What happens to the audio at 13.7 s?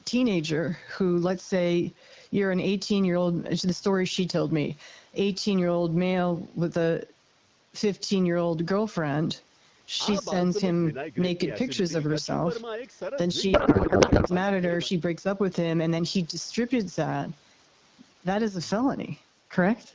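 At 13.7 s the receiver is unpacking the AMR-WB frames in the wrong layout, a codec payload misread, which points to octet-aligned packets being read as bandwidth-efficient. Every field lands in the wrong place, so the decoder builds sound from meaningless parameters. From 13.53 to 14.29 s the speech gives way to garbled noise and warble that barely tracks it, and it stops once the layouts agree again.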